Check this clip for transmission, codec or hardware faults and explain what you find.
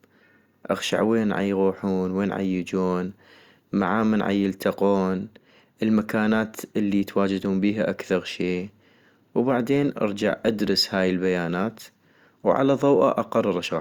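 No transmission, codec or hardware fault can be heard anywhere in this speech recording, and the signal stays continuous and steady throughout.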